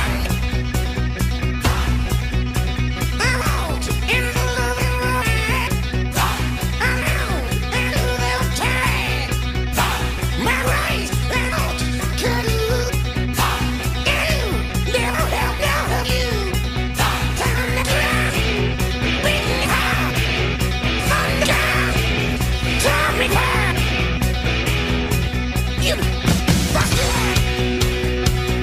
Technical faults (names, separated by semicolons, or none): none